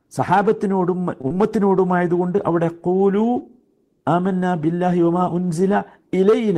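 At 1.21 s there's a short stall from a late packet: the jitter buffer ran dry, so the last sound got stretched about 23 ms and nothing was lost. Right after, at 1.28 s, comes a short concealed packet loss, where roughly 20 ms never arrived and got patched over, leaving a brief smear.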